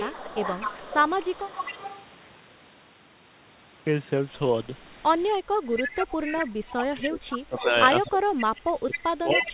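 From 0 to 2.02 s, a faint delayed copy of the speech trails the talker by 255 ms, about 10 dB down. This is an echo leak, likely from a far-end speakerphone whose echo canceller let its own pickup slip back. From 5.32 to 5.8 s, the talker briefly dips by roughly 10 dB. That is speech suppressed in double talk, likely the canceller ducking everything while both sides overlap. The echo leak returns at 5.76 s, louder at about 5 dB below the speech, and runs to the end. From 6.48 to 9.49 s, suppression deepens to roughly 30 dB, pulling the talker down for about three seconds. Everything stays within a 4 kHz band, which fits a G.711 narrowband call.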